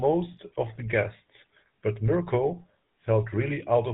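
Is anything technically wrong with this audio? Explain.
Yes. Throughout the speech the GSM full-rate codec has left plain damage: a buzzy, gravelly roughness, which fits a 13 kbps stream. The codec rebuilds the vocal tract from a filter driven by sparse, regular pulses, discarding most excitation detail. On a spectrogram, everything above 4 kHz is empty.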